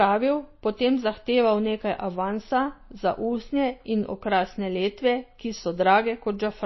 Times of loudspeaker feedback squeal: none

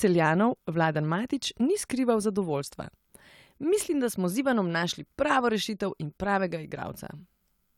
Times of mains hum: none

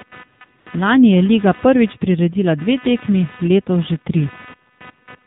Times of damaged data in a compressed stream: none

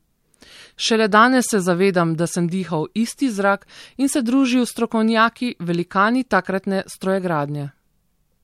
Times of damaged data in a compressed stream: none

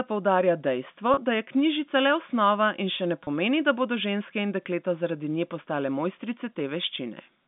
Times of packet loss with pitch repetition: 1.14-1.17, 3.24-3.27

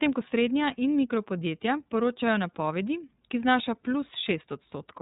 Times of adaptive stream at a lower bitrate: none

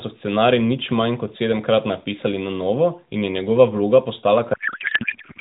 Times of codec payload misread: 4.54-5.41

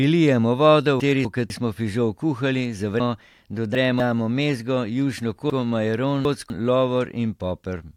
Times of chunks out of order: 1.00-1.50, 3.00-4.00, 5.50-6.50

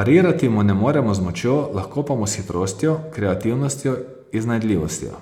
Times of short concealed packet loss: none

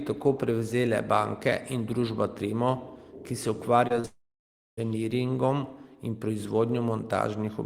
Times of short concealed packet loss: 3.87-4.06

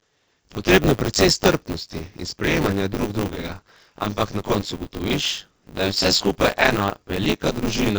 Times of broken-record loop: none

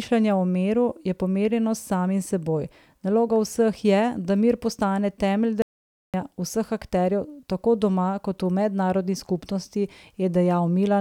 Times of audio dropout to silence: 5.62-6.14

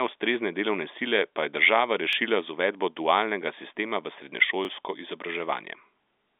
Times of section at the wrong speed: none

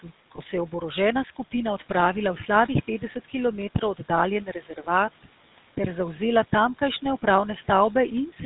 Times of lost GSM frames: 0.36-0.39

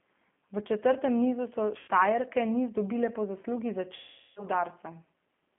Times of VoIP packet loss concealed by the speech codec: 1.79-1.88, 3.95-4.46

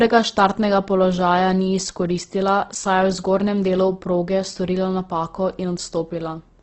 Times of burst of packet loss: none

